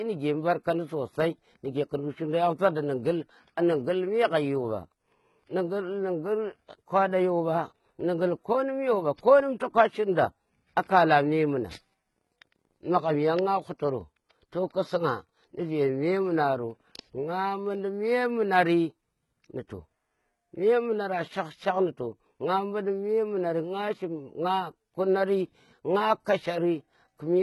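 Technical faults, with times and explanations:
Throughout, HE-AAC compression: the speech stops at about 11.8 kHz, and its treble sounds synthesised rather than captured, likely because spectral band replication copies lower bands upward under a coarse envelope, so s sounds turn gritty and metallic. The heavy damage fits roughly 16 kbps.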